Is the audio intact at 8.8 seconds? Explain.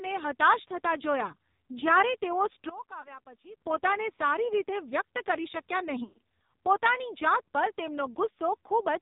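No. At 8.8 seconds, as everywhere in the clip, the speech has passed through the AMR narrowband mobile codec. It resamples to 8 kHz and rebuilds the voice from a vocal-tract model fed by a few pulses every 5 ms within 20 ms frames, and the heavy damage fits a low mode near 5.9 kbps. Nothing above 4 kHz survives, so the speech sounds muffled and telephone-like, with a buzzy, synthetic edge.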